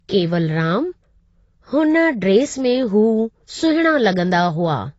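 Throughout the speech, the sound is dull and smeared, with a fizzy, warbling edge on sibilants and nothing above 7.6 kHz. The likely cause is heavy AAC compression, AAC-LC at a low bitrate around 24 kbps, trimming the top band.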